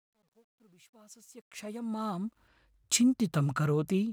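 From 0.0 to 2.48 s, the fade-in at the start carries truncation distortion on a fade. The gain stage keeps too few bits and adds no dither, which fits roughly 11-bit resolution. At low levels the speech waveform collapses into a few coarse square steps. It is worst from 0.0 to 1.33 s. There the sound turns gritty. As the fade rises toward 2.48 s, the grit thins out.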